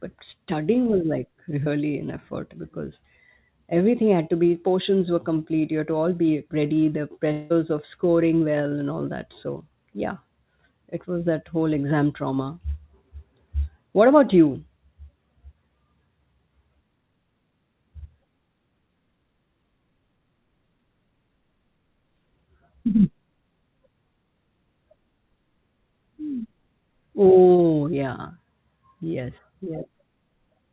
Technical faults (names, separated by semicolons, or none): short concealed packet loss; long network dropout